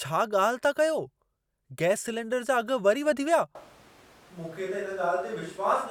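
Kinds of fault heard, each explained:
Switch to a distant microphone: After "वधी विया" at 3.55 s, the speech abruptly turns hollow and roomy until the end, likely because a farther microphone replaced the close one. The waveform drops about 5 dB, and the spectrogram shows thinner lows and a noise floor roughly 25 dB below the speech.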